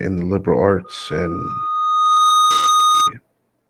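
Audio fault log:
0.84–3.13 s, loudspeaker feedback squeal: after "the liberal", a 1.2 kHz tone swells over roughly 1.5 s to about 5 dB above the speech, as the mic-speaker loop exceeds unity gain.
2.57–2.67 s, lost packet rebuilt from error correction: roughly 60 ms sounds rougher and noisier but has no gap; the decoder played low-bitrate copies, consistent with three lost packets.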